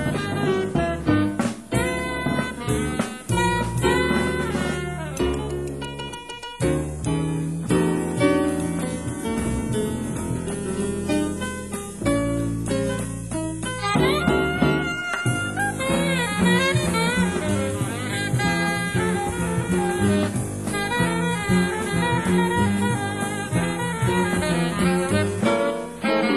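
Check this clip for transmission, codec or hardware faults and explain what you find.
Nothing in the clip points to a fault of any kind. There is nothing to report at any point in the audio.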